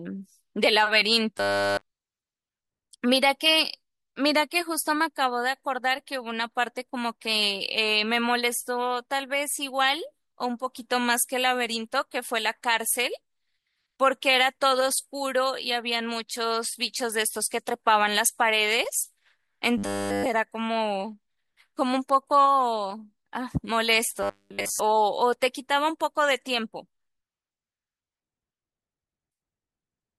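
At 1.37 to 1.86 s, 19.78 to 20.26 s and 24.23 to 24.80 s the speech becomes a rigid metallic buzz fixed at 100 Hz, the robotic sound from repeated short buffers. This is likely a 10 ms chunk replayed almost continuously while fresh audio fails to arrive.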